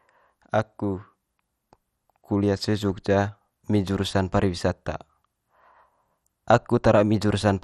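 MP2 compression runs through the whole speech clip: nothing sounds above 12.8 kHz, and the top is dull with a gurgling, granular grain. This is likely Layer II coding starved of bits, which fits about 64 kbps, so upper sub-bands drop out and the rest are coarsely quantised.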